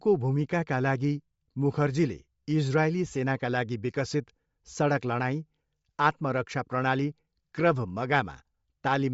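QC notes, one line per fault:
Throughout: Bluetooth LC3 compression. Speech stops above 7.6 kHz and sounds breathy and grainy, likely from a low LC3 bitrate near 32 kbps noise-filling the highs.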